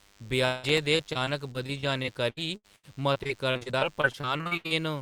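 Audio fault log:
throughout: DECT cordless phone buzz. A DECT handset or base nearby is emitting a short radio burst every 10 ms, and something in the audio path is rectifying it into the signal. The result is a thin, steady buzz at a 100 Hz repetition rate, rich in harmonics, sitting at a low level, roughly 35 dB below the speech. It stays constant under the whole clip and does not follow the speech at all.
0.45 to 4.72 s: repeated packet loss (robotic sound). Packets went missing or arrived too late over and over across this stretch. There are 27 gaps, the longest 177 ms, and about 1 s of audio was lost in total. The receiver fills each hole by stretching out the last sound it had, so about 23% of the span is patched-over audio. The speech comes out choppy and mechanical, with pieces dropping out and a robotic quality.
0.69 to 1.10 s: processor overload crackle. The processor could not keep up and missed several audio buffer deadlines in a row, around five of them. 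The short buffers point to roughly 1.5 ms each. Each missed buffer was output as silence, which cuts a tiny hole with hard edges into the waveform. Those abrupt dropouts produce a short burst of gritty crackle over the speech, laid on top of the packet-loss choppiness, and it stops once the load clears.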